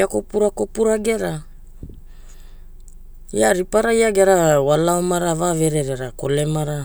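Nothing stood out on listening to this recording of speech.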